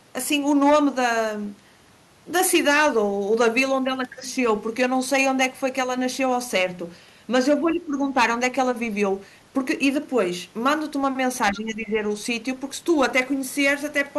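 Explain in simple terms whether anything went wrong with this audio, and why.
Two problems can be heard in this speech recording.

Hard clipping runs through the whole clip. The speech was recorded louder than the equipment could handle, so the loudest moments had their tops sliced off flat. Only a small share of the sound is affected, but those flattened peaks add a harsh, crackly edge whenever the voice gets loud. It is a gritty texture rather than steady distortion.

The voice also briefly weakens twice, from 7.59 to 8.05 s and from 11.51 to 12.02 s. Each time it sounds partly turned down for about half a second. The second dip is noticeably deeper than the first. This is likely speech suppressed in double talk. When both people on a call speak at once, the echo-cancelling system can confuse the talker's voice with the echo from the other person's loudspeaker and turn down both.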